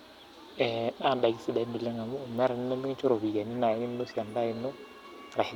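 Speech recording with no audible technical faults.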